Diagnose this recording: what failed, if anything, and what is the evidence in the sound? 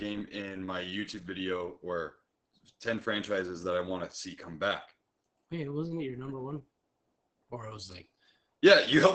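The failure is at the codec stage: heavy Opus voice compression across the whole clip. The speech is muffled, with nothing above about 8.6 kHz, and it has a hoarse, slightly robotic grain. The grain comes from the SILK linear-prediction coder quantising the excitation coarsely, which points to a wideband setting near 10 kbps. A plain low-pass filter or band limit would dull the sound without adding that rough, buzzy texture.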